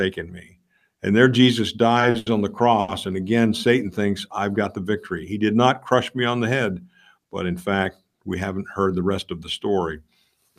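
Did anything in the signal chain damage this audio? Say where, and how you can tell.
Yes. Network stage: short stalls from late packets at 2.10–2.16, 2.18–2.28 and 2.80–2.90 s. The jitter buffer emptied, so sound was held 40, 80 and 80 ms.

Jitter buffer speed-up at 8.79–9.18 s. Speech runs 114% fast at unchanged pitch. The receiver trimmed around 70 ms of pitch periods to cut excess delay.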